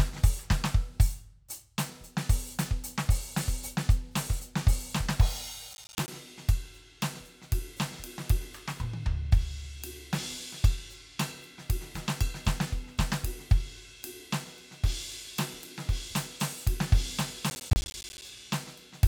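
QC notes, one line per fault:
5.74–6.08 s, processor overload crackle: the music breaks into a gritty burst as the processor misses a long run of buffer deadlines, each dropping a short hard-edged silence, spaced in a way that fits buffers of around 10 ms.
17.50–18.22 s, processor overload crackle: a longer tearing stretch of the same kind, with roughly twice as many missed buffers leaving silent gaps, until the load eases and the crackle stops.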